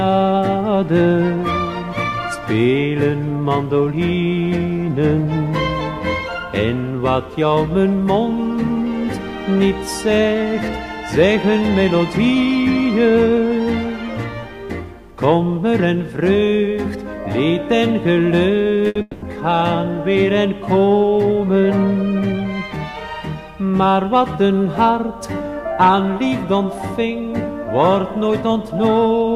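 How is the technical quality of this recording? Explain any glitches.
The recording has three network-related glitches, two close together near 19 s and one near the end.

From 18.87 to 18.97 s there is a short stall from a late packet. A packet missed its playout time, so the receiver stretched the preceding sound by 80 ms until it arrived, then resumed. Nothing is lost, but the sound is held too long, with a brief buzz or dip, and delay grows by 80 ms.

From 19.01 to 19.24 s comes a call audio freeze. The last sound is extended for 210 ms as a fading buzz or hiss, without dropping to silence, before the audio resumes where it stopped. The likely cause is delayed packets draining the jitter buffer. No audio is missing, but 210 ms of delay is inserted.

From 27.78 to 28.43 s there is a jitter buffer speed-up. With surplus audio buffered, the receiver trimmed short pitch-period segments repeatedly, removing about 50 ms in total. 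Playback runs at 107% speed with pitch unchanged, so this stretch sounds noticeably hurried.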